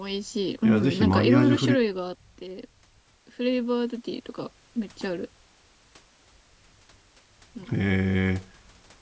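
No technical faults can be heard in this speech.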